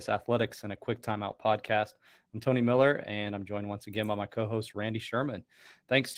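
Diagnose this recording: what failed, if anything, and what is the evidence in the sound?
Codec stage: Opus voice compression throughout makes the speech hoarse and slightly robotic, fitting roughly 16 kbps hybrid coding; a spectrogram shows smeared harmonics and patchy energy above 8 kHz.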